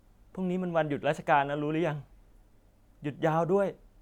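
No technical faults can be heard anywhere in the recording. The speech continues from beginning to end without any audible interruption or disturbance.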